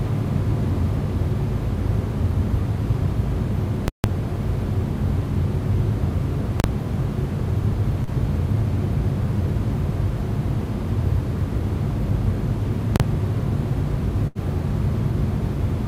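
At 3.88 to 4.04 s, a calculation produced invalid numbers at full scale, pinning the output at its extreme value for a 160 ms block. The result is a very loud pop at each edge with nothing audible between. The same fault returns in shorter 40 ms blocks at 6.60 to 6.64 s and 12.96 to 13.00 s, where each collapses into a single bang.

At 8.03 to 8.10 s, a short concealed packet loss means about 40 ms of audio never reached the decoder in time. The receiver extended the preceding sound to cover the hole and then blended back in, leaving a brief smear in the everyday sounds.

At 14.27 to 14.38 s, a burst of packet loss dropped about 80 ms. The receiver stretched the last sound and faded it as the gap lengthened, so a held buzz or dying hiss gives way to audio resuming further on, with that stretch missing.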